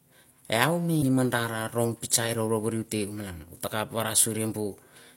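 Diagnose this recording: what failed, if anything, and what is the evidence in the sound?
The failure is at the codec stage: damaged data in a compressed stream. From 0.98 to 1.04 s the speech is interrupted by a brief glitch lasting about 60 ms. Corrupted bytes in the encoded file gave the decoder frames it could not read correctly, so it lost sync until it found a valid frame header and resynchronised. On a spectrogram this shows as a short disruption that ignores the harmonic structure of the speech. On the waveform it appears as an abrupt discontinuity.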